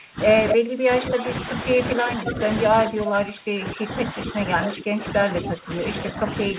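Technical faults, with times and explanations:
0 to 0.2 s, 0.54 to 1.3 s and 1.76 s to the end, speech suppressed in double talk: the level dips by up to about 25 dB in the first two spans and about 15 dB in the last. This is likely an echo canceller that couldn't separate near speech from loudspeaker echo and attenuated both.
2.27 to 2.32 s, echo leak: a brief copy of the speech arrives about 0.25 s late, about 10 dB below the speech. This is likely far-end loudspeaker pickup that the echo canceller failed to remove, band-limited to 4 kHz by the G.711 call path.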